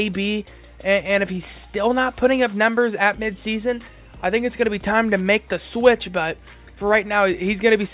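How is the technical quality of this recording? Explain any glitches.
No glitches to explain: the audio comes through a G.711 A-law call path at 64 kbps, which limits the bandwidth to nothing above 4 kHz.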